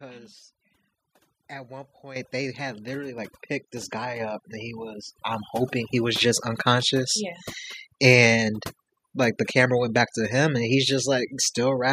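A speech recording with overdone noise removal throughout: the background drops to near silence with twinkling specks, and quiet parts of the voice are cut along with the noise. The microphone volume is stepped up three times: at 2.16 s after "at one" by about 10 dB, at 3.18 s before "picked this guy up" by about 6 dB, and at 4.2 s between "picked this guy" and "up and" by about 4 dB. Voice and background jump together, unlike a compressor's gradual swell.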